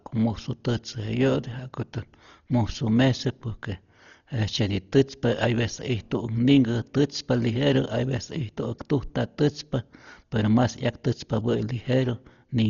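A speech clip with heavy codec damage from start to finish. The sound is dull, and nothing is present above 7 kHz. A rough, fluttering noise sits around the tonal parts of the speech. This is likely Dolby Digital compression at a very low bitrate, with the damage pointing to something near 32 kbps. At that rate the encoder trims the top of the band. It also leaves many frequency lines without real detail, and the decoder fills them with dither noise.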